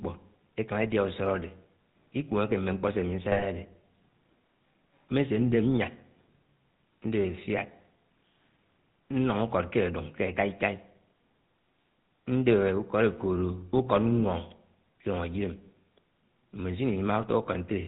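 From the start the speech carries the buzzy, gravelly roughness of the GSM full-rate codec, and the damage is plainly audible. The codec imitates the vocal tract with a filter fed by regularly spaced pulses that keep only a third of the excitation, so voiced sounds turn rasping and nothing above 4 kHz survives. The sound fits a 13 kbps coder. Unlike a plain low-pass or narrowband line, the grit sits inside the voice itself and is not only a loss of brightness.

Between 3.32 and 3.45 s come GSM bit errors. Corrupted bits reach the decoder and spoil its filter, pitch and gain values, so over those 0.13 s the spectrum warps and the level jumps, heard as squawks, pops and gargling. The span points to a handful of 20 ms frames hit at a bit error rate of a few percent. Packet loss concealment would give smeared or repeated sound, but here the frames are decoded wrongly and turn harsh and garbled.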